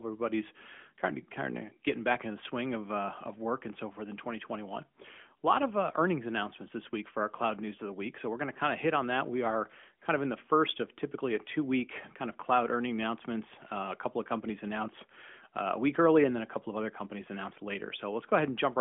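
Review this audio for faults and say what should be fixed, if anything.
No faults found here, so nothing needs fixing.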